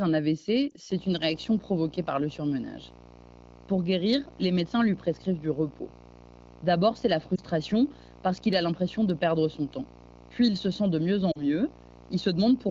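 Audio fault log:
0.70–0.74 s, 7.35–7.40 s and 11.31–11.45 s, lost AMR speech frames: the first two are brief dips or warbles. At 11.31 s the sound drops to near silence for longer before recovering. Radio errors corrupted the frames, so the decoder filled the gaps by repeating the last good pitch and vocal tract settings at falling gain. That was one 20 ms frame each time for the first two and two frames, about 40 ms, at the end.
0.89–12.70 s, video or display buzz: a steady 60 Hz buzz with a gritty hash riding above it, sitting about 25 dB below the speech. It runs from just under a second in to the very end. A screen or video cable is coupling its field-rate energy into the audio path. The buzz sounds through pauses and under the clean wideband AMR-WB audio at 15.85 kbit/s.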